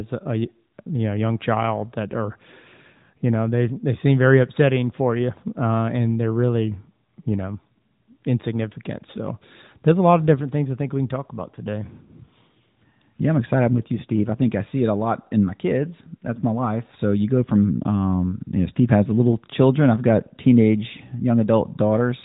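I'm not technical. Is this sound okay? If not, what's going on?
Yes, this speech clip sounds fine, with nothing going wrong anywhere in it; it simply has the narrower, phone-call quality that comes from the AMR narrowband mobile codec, which leaves out the highest sounds above about 3.8 kHz.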